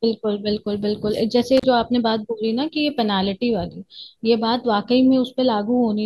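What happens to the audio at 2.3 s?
Nothing goes wrong at 2.3 s; the speech continues there without any audible fault.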